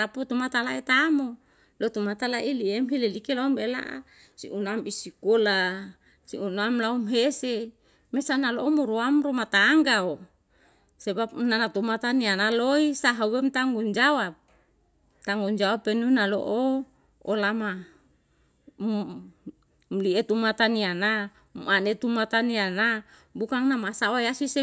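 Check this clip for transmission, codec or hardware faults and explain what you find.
Nothing here points to a transmission, codec or hardware problem; the speech comes through without any dropouts, glitches or other damage worth flagging.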